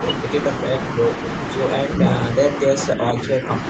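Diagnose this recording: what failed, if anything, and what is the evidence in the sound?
Call processing stage: from 2.91 to 3.48 s the speech dips by around 5 dB in patches, likely speech suppressed in double talk as the echo canceller ducked the near talker along with the loudspeaker echo.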